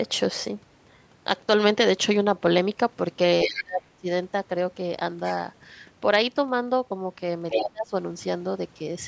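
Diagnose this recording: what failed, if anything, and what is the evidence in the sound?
The speech dips sharply from 3.44 to 4.09 s and again from 7.54 to 7.94 s, dropping by a deep margin. This is speech suppressed in double talk at the call-processing stage: the echo canceller likely mistook simultaneous talk for loudspeaker echo and attenuated everything.

A second voice intrudes at 3.48 to 3.63 s, somewhat below the main speech, and at 7.5 to 7.69 s, roughly as loud as it. This is the other side's voice leaking through, likely because the echo canceller left part of the loudspeaker signal in the microphone path.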